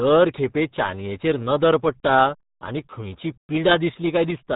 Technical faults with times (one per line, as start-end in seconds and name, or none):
0.00-4.55 RealAudio 14.4 codec